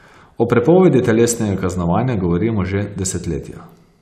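Speech recording with no audible technical faults anywhere in it.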